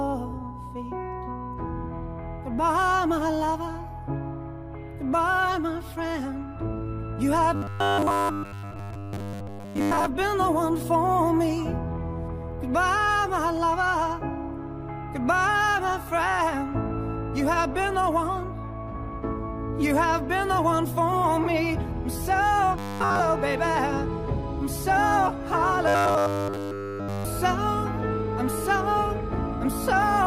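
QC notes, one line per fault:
7.55–10.06 s, 22.79–23.20 s, 25.88–27.25 s, robotic sound from repeated short buffers: a rigid, metallic 100 Hz buzz replaces essentially all of the real audio in each span. The buzz rate stays fixed rather than tracking the original pitch, which fits a 10 ms chunk likely being replayed while new audio failed to arrive.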